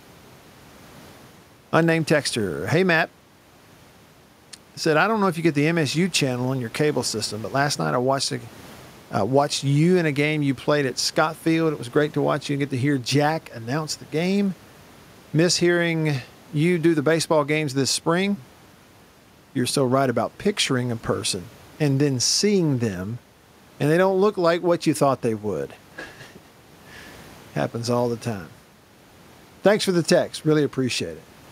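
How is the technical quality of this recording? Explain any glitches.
No technical glitches can be heard anywhere in this speech recording. There is nothing to explain, as no fault turns up at any point.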